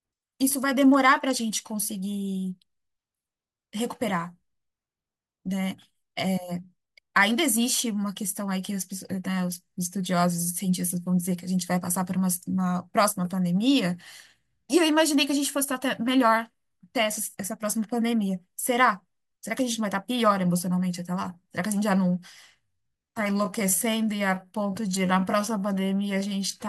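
At 22.69 s the pace suddenly drops and stays slow right to the end, while the pitch doesn't budge. That's a time-stretched section, running at about 0.7 times normal speed. It's likely the work of software stretching that last stretch to fill a set length, padding it out by repeating tiny slices of the waveform to hold the pitch. You can hear it: the speech drags.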